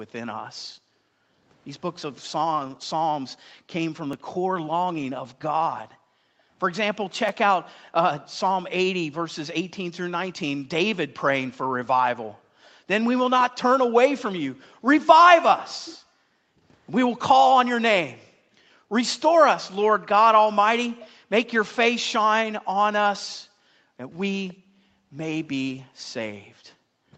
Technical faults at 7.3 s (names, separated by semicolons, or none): background gated by the echo canceller; repeated buffer